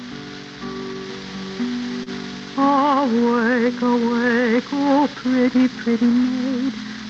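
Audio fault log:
2.03 to 2.10 s, short stall from a late packet: a packet showed up late, so the jitter buffer ran dry and the receiver stretched the last bit of sound for about 31 ms until it landed, then picked up right where it left off. Nothing gets lost, but everything after that point sits 31 ms later, and you hear a brief held, slightly buzzy smear. It sits over the call path's Opus coding, which tops out around 8 kHz.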